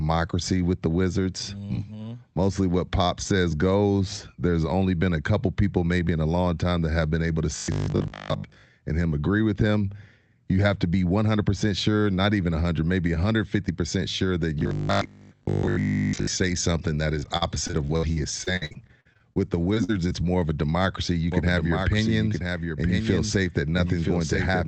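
From 7.56 to 8.64 s, and again from 14.59 to 16.27 s (between "sure that" and "say something that"), the speech collapses into a rigid, metallic buzz pitched at 50 Hz that only loosely tracks the talker. This is robotic sound from repeated short buffers, likely caused by audio arriving too seldom. The player keeps looping the most recent slice, which fits a 20 ms buffer, and most of the real audio in those spans is skipped.

From 17.19 to 19.38 s, right after "say something that", the speech turns choppy and robotic, with pieces dropping out in quick succession. This is repeated packet loss (robotic sound). Holes arrive one after another, the longest about 61 ms, and each is patched by stretching the preceding sound. Roughly a fifth of the stretch is synthetic fill, with close to half a second of real speech lost overall.

Two brief smears follow, at 19.74 to 19.78 s and at 20.09 to 20.13 s, the second just before "more of a democracy". 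Each is a short concealed packet loss. About 20 ms of audio failed to reach the decoder in time, and the receiver extended the last sound over the hole before blending back into the real signal. It comes across as a tiny wobble, and a short consonant can disappear in it.

Between these, from 19.84 to 19.93 s, a burst of packet loss leaves a slightly longer hole of about 40 ms. The concealment holds the last sound as a fading buzz or hiss for a little under 50 ms, and the speech then resumes further along, with the intervening audio gone.

From 21.32 s to the end, a second full-band copy of the speech trails the original by about a second, roughly 5 dB quieter. It starts abruptly and has no room colour. This is a doubled audio track, likely from the same audio being mixed in again through a slower path. The call path itself, Opus at 24 kbps, is audible as a high-frequency ceiling at 8 kHz.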